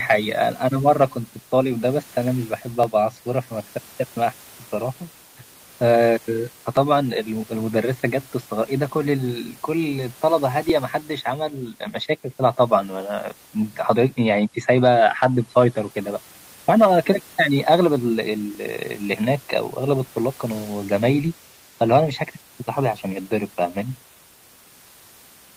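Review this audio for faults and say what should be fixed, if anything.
Regular clicks recur every 3.93 s from 2.83 s to 22.47 s, around seven in all, and room noise sits about 30 dB below the speech. These are likely clock drift buffer slips: two independently clocked devices differ by a few hundred ppm, so the buffer periodically drops or repeats a block of several dozen samples. Run both devices from one shared clock, or add adaptive resampling between them.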